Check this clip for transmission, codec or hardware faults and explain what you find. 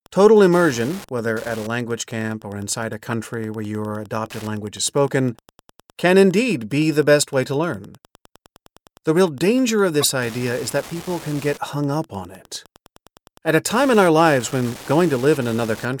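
Two faults are present: one continuous and one that recurs three times in the speech.

Wi-Fi interference runs through the whole clip as a steady ticking about ten times a second, roughly 25 dB below the speech. A nearby Wi-Fi radio's 102.4 ms beacon is being rectified by the audio circuit.

Corrupt frame decoded: a short chirp or blip occurs at 3.11 to 3.13 s, after "camp or inside a"; at 10.01 to 10.06 s, after "real danger of", where it is loudest; and faintly at 11.39 to 11.41 s, before "get hung up on". Each chirp comes from a few compressed frames that were played despite bit errors, placing energy at the wrong frequencies.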